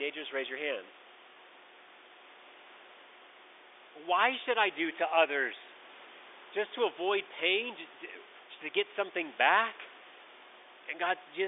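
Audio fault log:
No faults to log for this clip.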